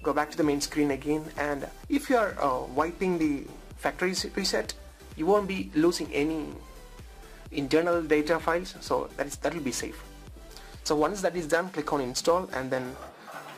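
Nothing in the audio stood out as a technical fault on listening.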